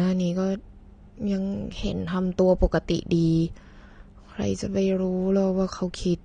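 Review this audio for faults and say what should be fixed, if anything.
Right across the speech there's a dull, smeared quality, with nothing above 9.7 kHz and a watery, fizzy edge on the sibilants. That's likely AAC compression: the encoder quantises each frame's spectrum against a hearing model and, short of bits, drops the top end and thins out what's left. The damage level fits a low-bitrate AAC-LC encode of around 32 kbps. Encoding at 96 kbps or higher, or keeping a lossless master, would prevent it.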